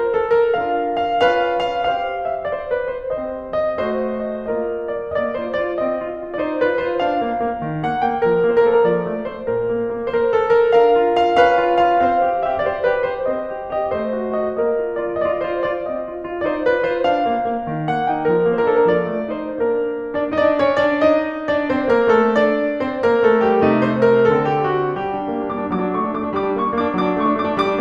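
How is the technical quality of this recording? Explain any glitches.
No technical faults are audible anywhere in this music recording, so there are no glitches to explain.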